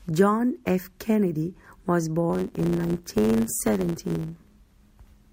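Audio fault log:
2.29–5.32 s, block size mismatch (truncated): each block's tail is discarded, causing a 100 Hz buzz and speech running 1.07 times faster with its timbre kept, unlike resampling.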